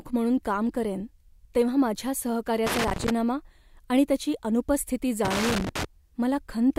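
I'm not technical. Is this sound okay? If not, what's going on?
No, there's a problem. Twice in this speech clip you get a loose connector crackle: from 2.67 to 3.10 s, right after "काम करेन तेव्हा माझ्या", and from 5.25 to 5.85 s, after "आणि त्याची अनुपस्थिती". It's an uneven scratchy burst, like a cable plug that's worn or dirty. When it wiggles, the contact keeps breaking and reconnecting, so the sound gets chopped up for about half a second each time.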